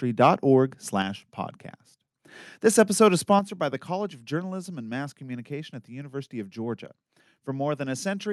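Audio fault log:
0.22–0.30 s and 3.31–3.34 s, microphone overload: The loudest peaks turn harsh and crackly for a moment. The first burst goes about 3 dB past the converter's limit, with around 5 percent of samples flattened. The second, just after "episode is" and before "by the", goes about 1 dB over, with a couple of percent flattened. The likely cause is mic input gain set so high that the converter chopped off the waveform tops. Unlike a level drop, this adds distortion while the loudness stays the same.
1.02 s and 3.39 s, microphone volume stepped down: The whole signal, voice and background together, suddenly gets quieter, by about 4 dB and then about 6 dB. The second step falls between "episode is" and "by the", right after the clipped peak at 3.31 s. This is likely automatic gain control reacting to the overload by cutting the device's input level. The drop is clean and abrupt, with no added crackle, which sets it apart from the overload itself.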